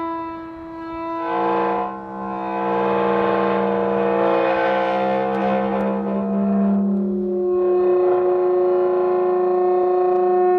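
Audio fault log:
1.78 s, 5.81 s, 9.83 s: overlapping chunks. Each 4-second chunk starts about 25 ms early, so that sliver replays at every join, giving a regular little stutter.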